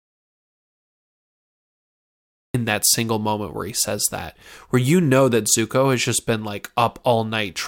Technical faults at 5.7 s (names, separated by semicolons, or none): none